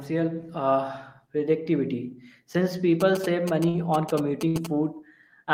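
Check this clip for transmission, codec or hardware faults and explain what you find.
Two faults are present: GSM signalling bursts and two bursts of packet loss.

From 3.01 to 4.67 s, GSM signalling bursts from a nearby 2G phone, sending short groups of radio bursts, are rectified by the audio circuitry. They sound like a galloping dit-dit-dit of short buzzes repeating at about 217 Hz, roughly 10 dB below the speech.

At 3.69 to 3.76 s and 4.48 to 4.56 s, bursts of packet loss mean that packets were lost or arrived too late. The receiver stretched the last sound over the gap, for 53 ms and then 61 ms, fading it as a held buzz or hiss. The speech then resumes with 60 ms missing each time.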